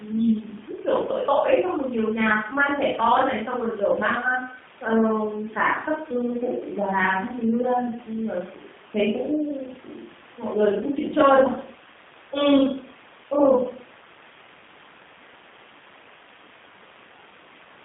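From start to finish, the speech carries G.729 codec damage. Nothing passes below 150 Hz or above 3.6 kHz. The coder rebuilds speech from a vocal tract model and sparse pulses, which fits 8 kbit/s. Voices sound plainly rough and synthetic.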